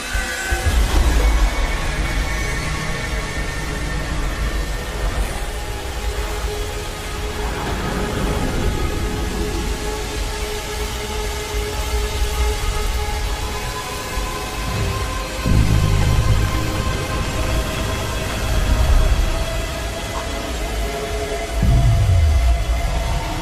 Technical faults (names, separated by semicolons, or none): none